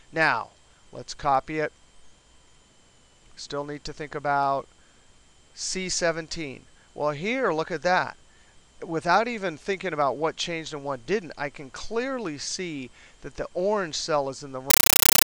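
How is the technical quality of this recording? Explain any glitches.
There is one serious glitch, at the very end. From 14.70 s to the close, the sound becomes a compressed stream played as audio. An AC-3 stream, likely at 448 kbps, was passed as raw samples instead of decoded. It becomes harsh, loud static chattering at 31.25 Hz, with noise bursts of about 9.3 ms.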